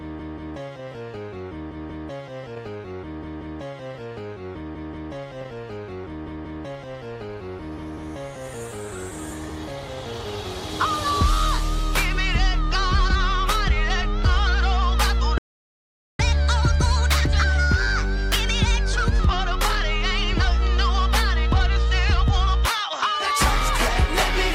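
At 15.38 s the sound cuts out mid-flow. Silence lasts about 0.81 s, until 16.19 s. This is a playback stall. The player likely ran short of data or its thread was blocked. When output returns, the sound picks up where it stopped.

From 16.19 s to 19.19 s comes catch-up at higher speed. The player resamples its backlog to regain lost time. Playback runs at 1.25 times normal speed. Pitch rises by about four semitones. At 19.19 s both drop back to normal.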